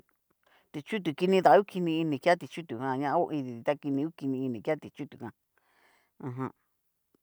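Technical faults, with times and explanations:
No technical faults can be heard in this speech recording. There is nothing here that needs a time or an explanation.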